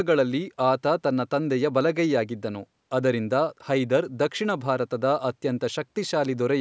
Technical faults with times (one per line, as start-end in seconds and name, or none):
none